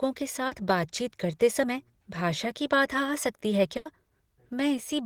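Right near the start, around 0.47 to 0.53 s, there's a short concealed packet loss: roughly 40 ms of the speech never made it to the decoder in time, so the receiver papered over the hole by carrying on the last bit of sound and then blending back into the real stream. You hear it as a quick smear or little wobble, and anything short that fell in that gap is simply gone.

Later, from about 3.77 to 3.87 s, you get a proper burst of packet loss, with around 80 ms lost in a row. Here the concealment has to stretch further, extending the last sound while fading it down, so a voiced sound turns into a held buzz and anything unvoiced into a dying hiss. When the speech picks up again it's jumped ahead, and those 80 ms in between are just missing.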